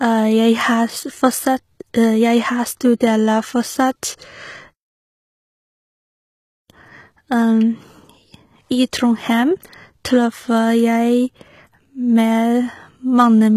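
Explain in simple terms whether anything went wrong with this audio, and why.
Something did go wrong, and it lasts the whole clip. The speech has plainly audible compression damage, likely from HE-AAC compression. This kind of encoder keeps only the lower part of the sound. It then fakes the treble by copying lower sounds upward. The fake treble is not the original sound. S sounds come out gritty or metallic. Nothing at all is left above about 14.9 kHz.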